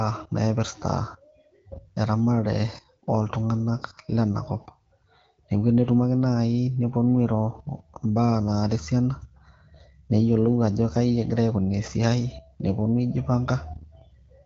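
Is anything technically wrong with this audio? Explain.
No, nothing here is technically wrong: this is simply speech carried over the AMR wideband (HD Voice) codec at 12.65 kbit/s, and it sounds just the way a normal HD Voice call at that rate should.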